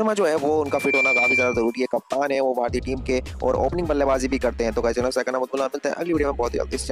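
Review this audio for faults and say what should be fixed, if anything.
A piercing 2.4 kHz tone swells over roughly a third of a second from 0.66 s to 1.86 s, peaking around 5 dB above the programme: loudspeaker feedback squeal, where the microphone re-amplifies its own loudspeaker output until that frequency runs away. Prevent it by lowering gain, keeping microphones away from and behind loudspeakers, or notching 2.4 kHz.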